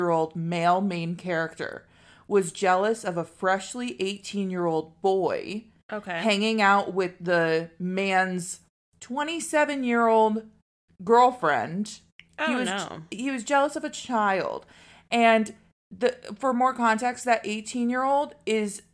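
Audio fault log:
No faults detected anywhere in the speech.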